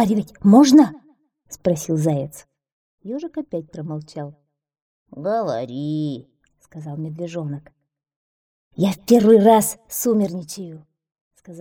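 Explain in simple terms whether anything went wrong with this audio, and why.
Zipper noise shows up three times: from 2.06 to 2.98 s as the level drops, from 6.98 to 8.38 s as it rises, and from 9.68 to 10.88 s as it drops further. Each time, the volume moves in small jumps, several per second, instead of a smooth slide. Every jump leaves a faint click, so the sound picks up a ticking, zipping texture for as long as the level is changing.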